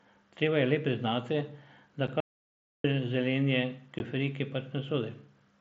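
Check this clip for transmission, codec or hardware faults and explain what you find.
Three faults are audible in the speech, carried over a wideband mSBC headset link with light codec graininess.

Unconcealed Bluetooth headset packet loss occurs at 2.07 s (7.5 ms) and 3.99 s (15 ms). Lost headset packets leave sharp-edged holes, far shorter than a dropout.

An audio dropout to silence runs from 2.20 to 2.84 s. It leaves a dead gap with no room tone, most likely from a briefly lost or muted input while recording continued.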